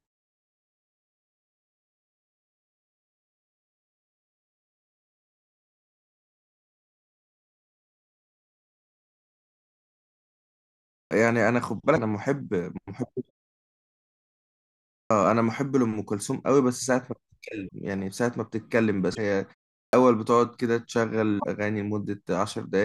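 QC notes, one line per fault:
10.95, 14.96 and 19.77 s: clipped start after a pause. Speech bursts in abruptly, losing roughly 0.14 to 0.16 s of its onset while the sleeping output device wakes.
11.95, 17.67, 19.14 and 21.38 s: broken MP3 bit reservoir. Brief 27 to 58 ms chirps or holes with a skip ahead, likely from dropped frames of about 26 ms each.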